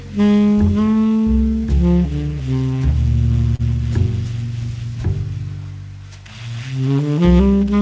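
At about 3.56 s there's a short stall from a late packet, running to roughly 3.62 s. A packet didn't turn up on time, the jitter buffer ran dry, and the receiver stretched the last bit of sound by 32 ms until the data arrived. Nothing actually gets lost, but that moment hangs on slightly too long with a faint buzzy smear, and everything after it lands 32 ms later. The band-limiting to 8 kHz throughout fits G.722 on a call path.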